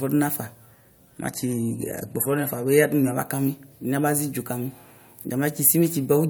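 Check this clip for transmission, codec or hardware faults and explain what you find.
One fault, a stretch where an adaptive stream switched to a lower bitrate, runs from 1.17 s to 3.17 s. The stream fell back to a cheaper encoding for those two seconds, which fits a drop from roughly 128 kbit/s MP3 to about 48 kbit/s. With fewer bits, the encoder discards the top band, so the speech loses everything above 13.2 kHz and turns duller and more artefact-laden. The quality changes abruptly at both ends, with no gap in the audio.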